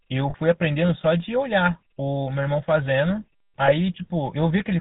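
The whole clip carries the GSM full-rate codec's buzzy, gravelly roughness and a dull top end with nothing above 4 kHz, which fits 13 kbps GSM.

There are lost GSM frames at 0.30–0.35 s and 3.66–3.70 s. Each gap is filled by repeating the last good frame, so you get a brief metallic ring, about 40 ms and then 20 ms long.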